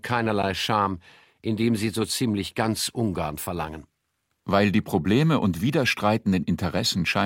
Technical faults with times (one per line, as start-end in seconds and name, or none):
0.43 gap at a join of encoded pieces